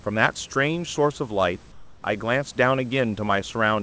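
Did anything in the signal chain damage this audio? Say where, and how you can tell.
Yes. From 1.72 to 2.04 s, comfort noise replaces the background: a 320 ms stretch of steady, featureless hiss about 5 dB quieter than the surrounding room noise. The likely cause is discontinuous transmission in call processing, with the receiver synthesising that noise.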